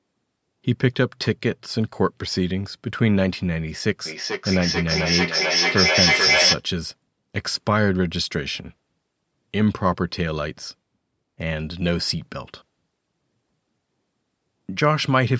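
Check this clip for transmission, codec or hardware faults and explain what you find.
One fault: a feedback echo between two devices from 4.06 to 6.65 s. A second device played this microphone's signal back into the room, where it was picked up again, so the sound returns roughly every 0.4 s. The repeats grow ringing and thin and build to about 2 dB above the speech instead of fading.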